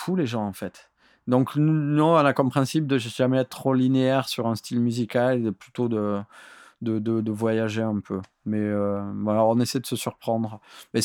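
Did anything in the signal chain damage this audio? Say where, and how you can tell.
No, nothing along the way has left a mark on this speech recording that I can hear, so there's no stage to point at here.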